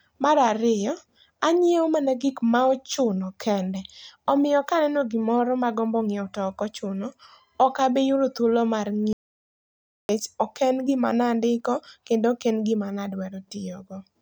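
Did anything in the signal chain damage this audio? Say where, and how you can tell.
Yes. Right after "ochuno okabiyudo thuolo mar", the speech cuts off at 9.13 s into dead silence with no room tone until 10.09 s, losing about 0.96 s: an audio dropout to silence, likely an input device or link failure while the recorder kept writing silence.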